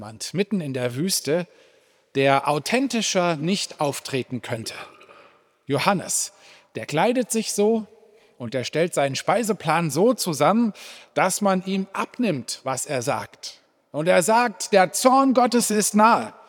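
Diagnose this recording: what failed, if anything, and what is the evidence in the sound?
Nothing in the chain from capture to playback has failed; the signal holds steady and continuous throughout, with no audible disruption at any stage.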